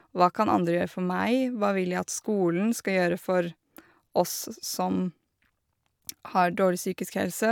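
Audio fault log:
No audible faults were found in this speech recording.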